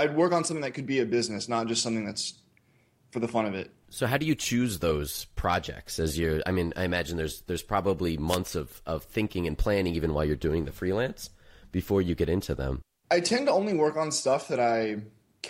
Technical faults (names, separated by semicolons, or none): wireless microphone noise hit